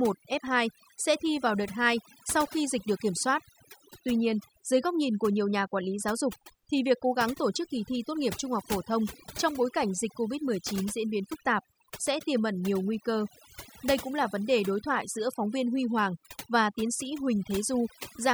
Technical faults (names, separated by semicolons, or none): overdone noise removal